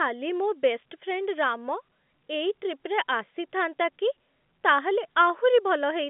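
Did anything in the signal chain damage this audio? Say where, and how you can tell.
No, none of the stages between the source and playback has damaged this speech. It carries the normal G.711 telephone coding, which fits A-law at 64 kbps, with the line band running from about 150 Hz to 3.5 kHz and nothing above about 3.7 kHz, and at most faint traces of the coding itself.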